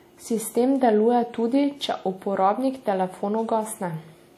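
From start to finish the speech has a ringing, washy smear, with hiss that swells and fades along with the voice and nothing at all above 17.8 kHz. That's likely WMA compression, the long transform blocks spreading quantisation noise, which fits a bitrate of around 48 kbps.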